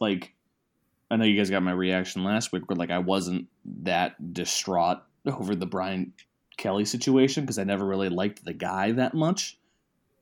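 Nothing in the speech stood out on listening as a technical fault at any point.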